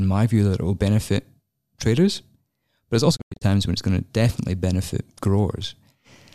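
A digital broadcast dropout runs from 3.15 to 3.43 s, where the receiver stopped getting valid frames and muted. The speech fades out over about 20 ms and breaks into several short holes totalling 168 ms, the longest 96 ms, before returning.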